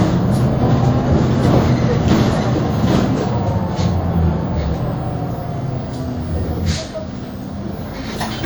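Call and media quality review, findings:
WMA compression, whole clip. Likely a low-rate transform encode, consistent with a 48 kbps stream; damage plainly audible. Quantisation noise spread over tens of ms: ringing, washy texture, hiss that breathes with the sound, and weak components dropped out. Band extends to about 20.1 kHz.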